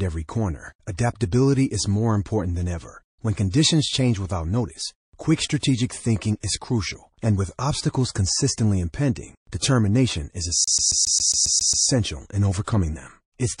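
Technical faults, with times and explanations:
Throughout: MP3 compression. The encoder is likely starved of bits, at a rate that sounds close to 40 kbps. To cope, it discards weak frequency lines, which flicker in and out from frame to frame. The damage is plainly audible: the speech has a watery, swirling texture, s sounds turn metallic and chirpy, and the starts of syllables are smeared.
3.50–3.54 s, 5.60–5.63 s, 6.40–6.43 s, 9.59–9.62 s and 12.64–12.68 s: pre-echo. The codec spreads its quantisation noise over a whole transform block, and the smearing fits a window of about 52 ms. It never switches to short blocks at attacks, so noise sized for each sharp onset leaks into the 28–36 ms of quiet before it. This is heard as a hiss about 19–27 dB above the background just ahead of "change without notice quick", "thinking is crucial and" and "is crucial and with", and at the two later points.
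10.64–11.86 s: CD stuck on one turn. On every rotation of the disc, the player's laser is knocked back one track at the same spot. The same 136 ms fragment of speech therefore plays nine times in a row, with a brief mute at each jump. The result is the rapid, evenly spaced stutter of a skipping CD, until playback moves on.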